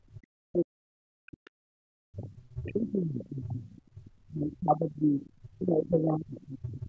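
A speech recording from a call, with echo-canceller faults throughout. From 0.00 to 0.18 s the background is gated by the echo canceller, dropping about 17 dB, a visible notch in the noise floor on the waveform. From 0.46 s to the end, speech is suppressed in double talk, with the voice repeatedly ducked by roughly 40 dB for around five seconds in all, likely because the canceller mistook it for loudspeaker echo. The spectrogram shows the speech bands, which stop at 8 kHz, fading or breaking into gaps. The other side's voice leaks through at 1.45–1.50, 2.30–2.90, 3.79–4.56, 5.21–5.46 and 6.42–6.73 s, roughly 20 to 40 dB below the talker, likely residual echo the canceller failed to remove, seen as faint, separate harmonic traces.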